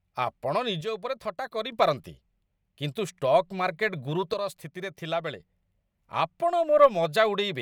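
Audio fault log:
0.81–1.72 s and 4.34–5.40 s, one channel drops out: likely a stereo channel lost, so the mono sum falls abruptly by about 6 dB and recovers after each span.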